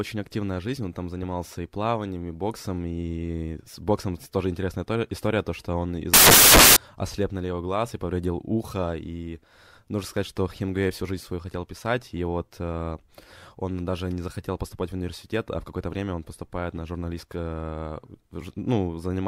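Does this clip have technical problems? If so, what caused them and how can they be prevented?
Yes. Samples built from the wrong bytes, 6.14 to 6.76 s: the reader misassembled each sample's bytes, so the fast-changing low bits dominate and the speech becomes loud, harsh broadband noise. Prevent it by checking the stream's byte order and alignment against its declared format before decoding.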